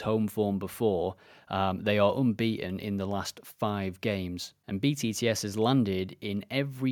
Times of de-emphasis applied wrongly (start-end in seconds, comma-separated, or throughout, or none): none